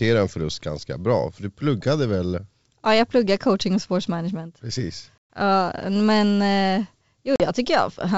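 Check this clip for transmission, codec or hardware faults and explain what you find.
Two dropouts from packet loss on an ADPCM call interrupt this 64 kbit/s G.722 wideband speech. At 5.18 to 5.34 s, about 120 ms (several packets) becomes hard-edged silence; at 7.36 to 7.45 s, a 40 ms gap (a couple of packets). During each gap the decoder's adaptive predictor and step size drift from the sender's, so speech resumes with brief, slight distortion before resettling.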